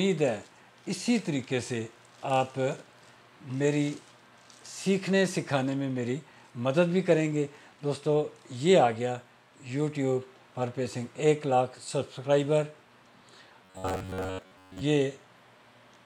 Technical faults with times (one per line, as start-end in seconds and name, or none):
13.65-14.81 robotic sound from repeated short buffers